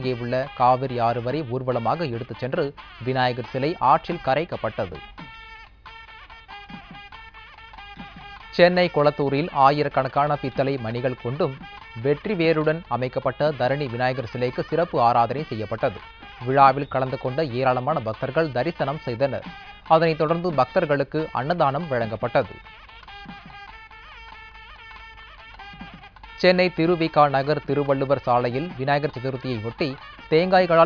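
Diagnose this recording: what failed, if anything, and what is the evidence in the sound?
Nothing failed; no fault is audible anywhere in the recording.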